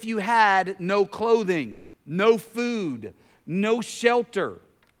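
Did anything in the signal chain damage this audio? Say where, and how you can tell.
Yes. From 1.71 to 1.95 s the speech breaks off and a smeared, buzzy continuation of the last sound fills roughly 220 ms before normal speech resumes. There is no true silence in the gap, and the speech picks up further along, with that stretch missing rather than delayed. This is likely a long network dropout: packets stopped arriving, the receiver's concealment stretched the final fragment to cover the hole, and the lost audio was never recovered.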